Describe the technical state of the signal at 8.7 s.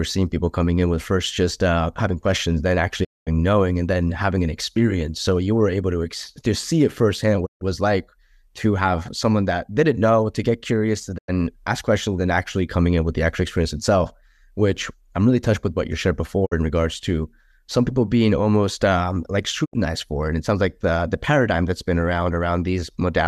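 At 8.7 s the speech signal is intact, with no fault audible at that moment.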